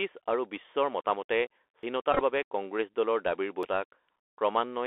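The Bluetooth CVSD headset codec shapes the whole clip. The speech is held to a narrow telephone band of about 300 Hz to 3.4 kHz, consistent with the 64 kbps one-bit-per-sample headset link. Because its adaptive step can't keep up with loud high-frequency energy, the result is clearly audible: scratchy sibilants, grainy hiss and distortion on strong peaks.

At 1.83 s the sound jumps forward abruptly, with roughly a fifth of a second gone and the two sides butted together without any silence. This is likely audio missing between chunks, where material is dropped as one 2-second processing block closes and the next opens.

From 2.13 to 2.22 s a Bluetooth headset packet repeated fault appears. About 45 ms of lost packets are scattered across this stretch, and the decoder replays the previous packet's bits in place of each one. The runs last about 10 ms at most, so they come through as short buzzy flutters near 267 Hz.

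At 3.63 s the same kind of skip returns, 1.8 seconds after the first, with about 200 ms missing and a hard join.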